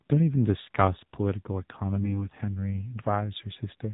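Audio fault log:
throughout AMR narrowband mobile codec. Nothing above 4 kHz survives, so the speech sounds boxed-in and thin. The codec damage is plainly audible. The voice is buzzy and synthetic, which fits a low AMR-NB rate of about 7.4 kbps. Few pulses drive its vocal-tract model.
1.96 to 2.28 s AMR bit errors. Here the speech keeps its pitch and level but turns hoarse, scratchy and gargly. Flipped bits misplace the driving pulses and skew the finer pitch, gain and spectrum values. The span fits roughly seven damaged 20 ms frames at a bit error rate of around 5 percent.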